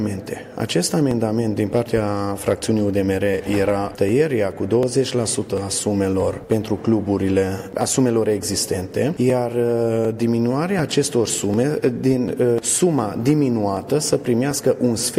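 From 0.37 s to 14.51 s, a click recurs every 0.74 s, about twenty in all, likely clock drift buffer slips: two clocks roughly 1000 ppm apart, each slip dropping or repeating around 30 samples. The strict, unchanging spacing separates it from random dropouts or packet loss.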